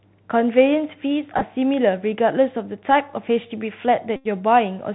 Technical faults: Bluetooth CVSD headset codec; Bluetooth headset packet repeated

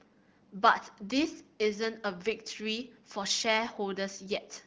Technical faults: none

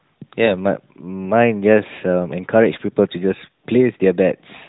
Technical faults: lost AMR speech frames

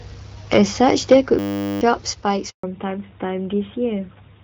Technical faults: system hang loop; handover gap; fallback to narrowband

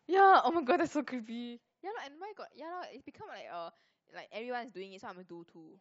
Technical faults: zipper noise

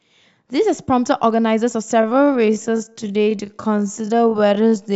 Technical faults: time-stretched section

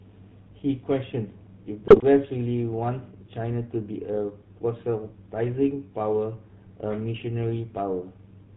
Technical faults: GSM full-rate codec; GSM bit errors

